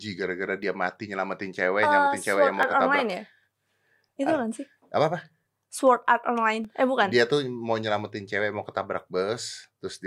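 A speech recording with small, regular ticks every 2.0 s from 0.63 s to about 8.64 s, each a gap of silence lasting about a millisecond. These are periodic USB or driver dropouts: something stalls the audio path at a steady interval, briefly losing samples.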